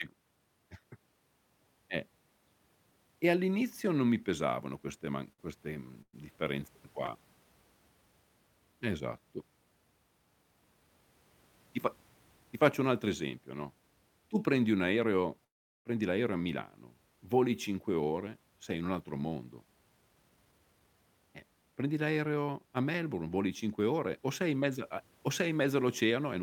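Repeated stalls (stutter) run from 5.05 to 6.15 s, right after "non mi pesavano queste". The speech halts four times, with about 0.2 s of filler in total, roughly a fifth of that stretch, and the longest hold 114 ms. Packets were arriving late, so the jitter buffer kept running dry, and each time the receiver stretched the last sound until data caught up. Nothing is lost, but the phrase drags and judders.

A call audio freeze follows at 15.44 to 15.87 s, between "tu prendi un aereo" and "l'aereo a". The speech stops, the final sound hangs briefly, and then comes about 0.39 s of silence before speech resumes exactly where it left off. This is likely a jitter buffer that ran empty while packets were held up in transit. The 408 ms gap is added to the timeline, and no speech is missing.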